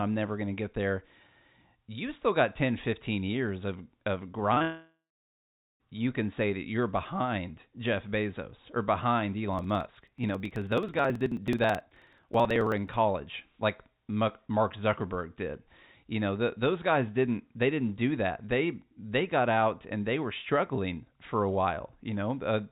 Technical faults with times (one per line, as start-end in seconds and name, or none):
4.54-4.62 short concealed packet loss
4.62-5.82 long network dropout
9.48-12.94 periodic USB or driver dropouts